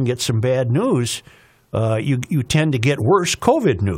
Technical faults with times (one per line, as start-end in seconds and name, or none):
3.01 damaged data in a compressed stream